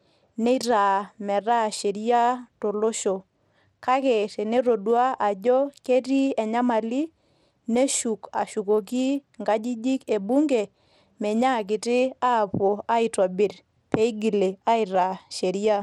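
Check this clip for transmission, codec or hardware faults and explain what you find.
One codec fault runs through the whole speech clip: the sound has clearly audible Bluetooth SBC compression damage, likely from an SBC link. At a low bit pool, consistent with roughly 96 kbps, the highest sub-bands get few or no bits and the rest are coarsely quantised. So the treble flickers in and out, and a gritty, aliased roughness rides on the speech. Unlike a plain low-pass filter, the top end comes and goes rather than being cut off cleanly.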